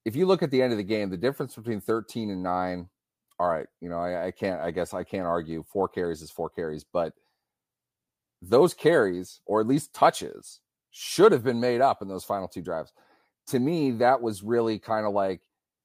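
No technical faults can be heard in this speech recording.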